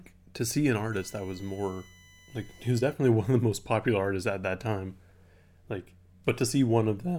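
From 0.93 s to 2.93 s, just after "to see an", a thin, steady whine sits under the speech at about 30 dB below it, its pitch fixed at 1 kHz with the strongest component at the 2 kHz harmonic. This is USB whine: the USB bus draws current in regular 1 ms frames, and that 1 kHz pulsing leaks into the audio path through shared power or ground, appearing as a fixed tone and its multiples.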